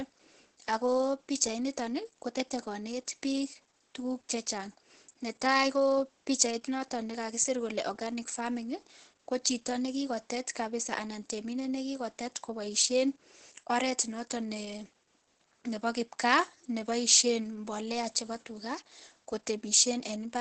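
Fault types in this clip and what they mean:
Opus voice compression: heavy low-bitrate SILK coding, around 10 kbps, leaves speech muffled and hoarse, and the spectrogram shows an empty band above about 8.9 kHz throughout.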